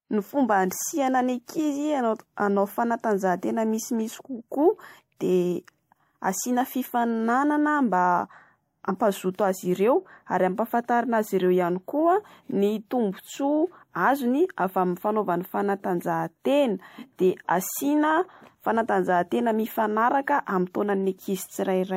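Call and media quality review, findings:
Compressed frames skipped: decoder dropped whole frames, missing or rejected as damaged. Speech jumps ahead by the length of the dropped frames. At 8.87–8.90 s, roughly 40 ms lost, fitting one 42.7 ms frame. At 16.85–16.89 s, after "fanaovana fanatanjahatena", about 0.1 s lost, fitting two frames.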